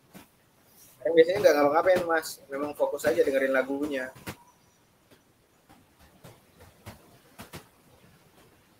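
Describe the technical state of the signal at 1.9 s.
At 1.9 s the background noise dips and swells in step with the speech. These are noise suppressor artifacts, present for the whole clip: the suppressor pulls bands it judges to be steady noise down by about 16 dB frame by frame, so the room noise, sitting about 18 dB under the speech, keeps getting gated unevenly.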